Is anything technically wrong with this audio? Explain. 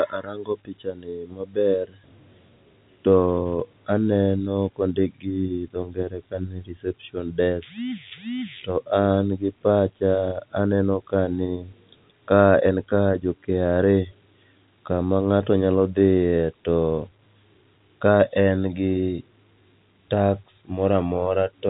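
No, nothing is technically wrong with this audio.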